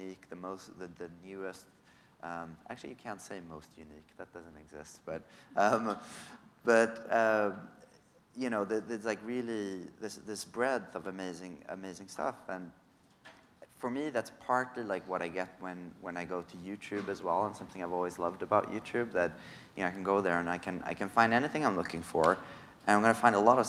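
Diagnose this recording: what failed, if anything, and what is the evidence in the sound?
Nothing failed; no fault is audible anywhere.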